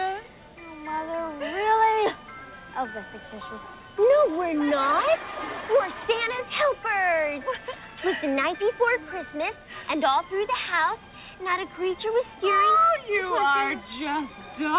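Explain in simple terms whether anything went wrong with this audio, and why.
Nothing went wrong with this audio: it simply came through a phone-style call line, which is why there is nothing above about 4 kHz, and that is normal for this kind of line.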